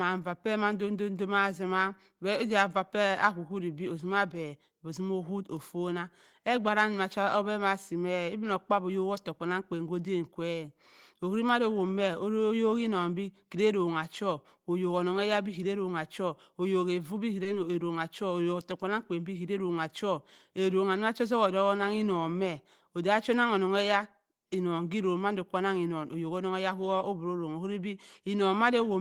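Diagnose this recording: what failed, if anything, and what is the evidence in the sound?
The network stage failed briefly: short concealed packet loss at 17.43 to 17.47 s, just after "evu bi". About 20 ms of audio never arrived at the decoder in time, and the receiver synthesised 20 ms to cover the gap by extending the preceding sound, then cross-fading back into the real signal. The result is a brief smeared, wobbly patch in the speech, where a short sound can drop out entirely.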